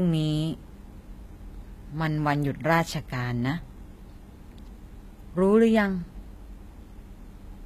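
Throughout, the speech carries plainly audible HE-AAC compression damage, likely from a low bitrate near 20 kbps. Unlike simple muffling, treble remains up to 14.9 kHz but sounds copied, so sibilants turn gritty and metallic.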